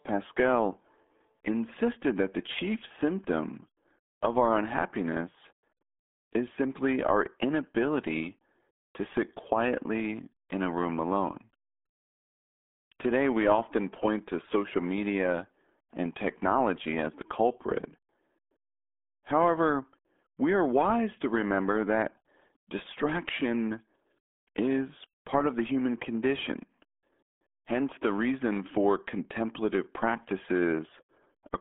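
From start to finish the speech sounds muffled and gargly, squeezed into a narrow telephone-like band that runs from about 250 Hz to 3.5 kHz, with nothing at all above 3.7 kHz. These are the signs of the RealAudio 14.4 codec, the RealAudio 1 scheme built for dial-up modems. Its very low data rate, which fits an 8 kbit/s stream, forces the encoder to discard the treble and coarsely model what remains, leaving heavy bubbling damage throughout.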